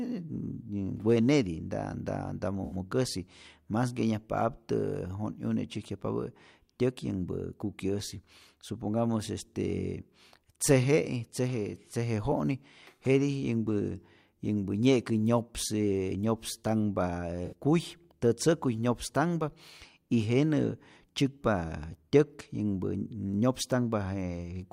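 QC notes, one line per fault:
2.65–2.75 s and 17.45–17.53 s, AAC frame loss with concealment: short smeared, noisy patches, the second just before "kuy tätzäkuy nyopstanhpä". Each loses about 64 ms, consistent with three dropped frames, and the decoder rebuilt the gap from the last good spectrum, so it smears rather than drops out.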